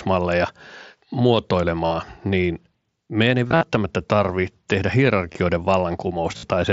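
Concealed Bluetooth headset packet loss occurs at 1.86 to 1.91, 3.48 to 3.63, 5.32 to 5.35 and 6.37 to 6.43 s. Missing packets are filled by repeating recent waveform. Each gap becomes a brief buzzy hold.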